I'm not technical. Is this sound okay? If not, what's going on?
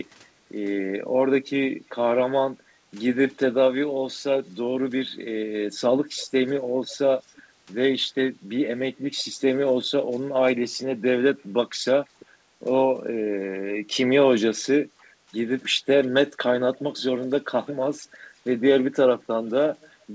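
No. Faint echo leak appears at 6.16–6.27, 6.91–6.95, 7.27–7.42, 12.2–12.26 and 17.68–17.73 s as a quiet repeat about 0.35 s late, likely from a loudspeaker's echo canceller missing some sound. At 14.95–15.08 s, background gated by the echo canceller makes the room sound dip briefly.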